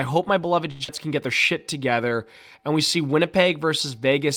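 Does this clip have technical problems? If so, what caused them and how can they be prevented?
Yes. At 0.71 to 0.82 s, after "hope my beloved", a short stall from a late packet holds the last sound for 87 ms while the jitter buffer sits empty. Nothing is lost.

At 0.84 to 0.89 s, before "can get their", a skip ahead drops roughly 100 ms and cuts the delay by about 70 ms.

From 1.58 to 2.10 s, between "can get their" and "and we see", a jitter buffer slow-down repeats pitch periods, adding 60 ms and playing at 90% speed.

A steadier network path with consistent packet timing, plus a jitter buffer sized to absorb the arrival variation, would prevent all three.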